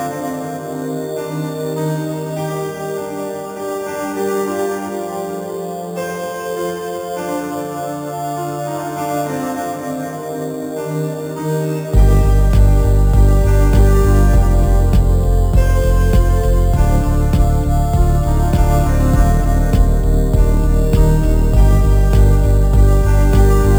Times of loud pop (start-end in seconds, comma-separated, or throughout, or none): none